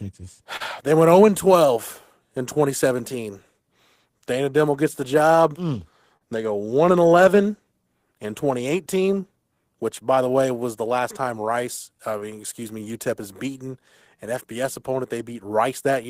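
The sender's clock runs roughly 3 percent slower than the receiver's throughout, which is clock drift between sender and receiver. Because packets arrive slightly slower than the receiver plays them, the jitter buffer keeps sliding toward empty, and the speech never settles into a fully even pace. Small timing hiccups recur across the clip at irregular spacing, never loud but persistently unsteady.

At 0.56 s comes a short stall from a late packet. The jitter buffer ran dry when the next packet was due, so the receiver held the last sound for 38 ms until the packet arrived, then resumed from the same point. Nothing is lost, and playback shifts 38 ms later. What you hear, from 0.56 to 0.62 s, is a syllable drawn out a touch too long with a faint buzzy sustain.

From 1.67 to 15.92 s the receiver makes repeated timing corrections to compensate for the slow sender. It keeps repeating tiny slices of audio, all in the same direction, which plays the speech at about 98 percent speed and adds about 300 ms in total. 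Each edit is small, so the effect comes across as a slightly dragging, uneven tempo with the odd soft stutter.

Between 2.54 and 6.23 s there are scattered short gaps, about seven of them, where packets arrived too late and each hole was bridged by extending the preceding sound. Together they fill about 70 ms, about 2 percent of that stretch, and the longest runs about 40 ms. Nothing is lost, and they sound like brief smears and little hiccups.

A second run of scattered short gaps falls between 7.47 and 9.15 s. There are about three, each patched by continuing the last sound, together covering about 20 ms, and none longer than about 7 ms. At that size they come across only as faint ticks or tiny blurs within the speech, much subtler than the earlier cluster.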